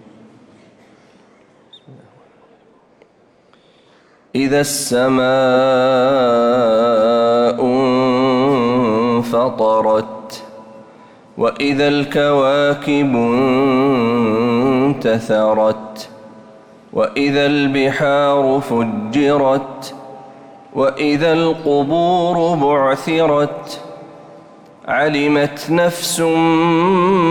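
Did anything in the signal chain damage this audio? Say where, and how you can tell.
No, nothing along the signal chain audibly damaged this audio, and I can't point to any stage where the signal was degraded.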